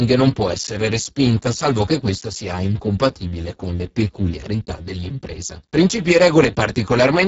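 Speex codec damage runs throughout: at a very low setting, around 6 kbps, CELP starves the excitation, leaving speech noisy and hoarse, with nothing above 7.7 kHz.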